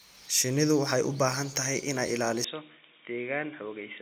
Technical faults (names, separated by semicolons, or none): input switched to a poorer device